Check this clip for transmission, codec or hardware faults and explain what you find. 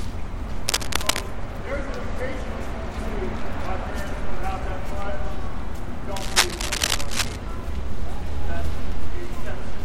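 Two bursts of cable scratch noise occur, at 0.68 to 1.21 s and 6.16 to 7.36 s. Each is dense, uneven rustling sitting only a few dB below the sound, likely from a worn cable or connector being moved so its contact resistance fluctuates rapidly.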